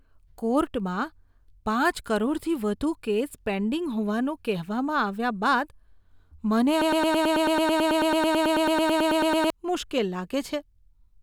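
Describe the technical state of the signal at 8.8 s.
At 8.8 s the signal is stuck in a broken-record loop running from 6.82 s to 9.50 s, most likely because the player, encoder or stream stalled and kept resending its last held fragment. A 109 ms slice of speech repeats 25 times back to back, a rapid stutter, and whatever should have played there is lost.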